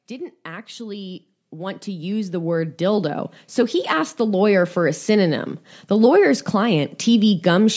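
From 0.07 s to 5.05 s, automatic gain rising lifts the speech by about 17 dB: the gain control judges the input too quiet and ramps its gain up slowly, so voice and background noise swell together over five seconds. The call microphone processing leaves nothing above 8 kHz.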